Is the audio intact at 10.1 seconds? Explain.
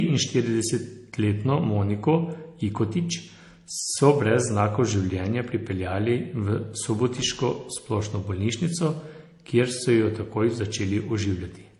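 No. At 10.1 seconds the speech carries transcoding between lossy codecs, present across the whole clip. It likely passed through an MP3 stage and then HE-AAC, each at what sounds like roughly 40 kbit/s. The second codec wastes bits re-encoding the first one's smearing and adds its own, so the speech sounds watery and swirly with a dull top. A spectrogram shows a hard high-frequency ceiling, patchy gaps, and smeared onsets.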